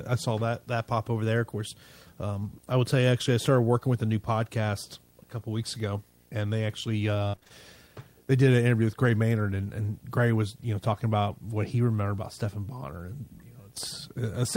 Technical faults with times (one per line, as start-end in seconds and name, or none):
0.00-14.56 video or display buzz
7.27-7.52 repeated packet loss (robotic sound)